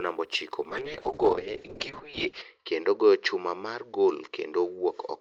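Speech that turns muffled and rough from 0.7 s, right after "namba ochiko", to the end: a call bitrate drop from 32 to 6 kbps, cutting bandwidth from 20 kHz to 8 kHz.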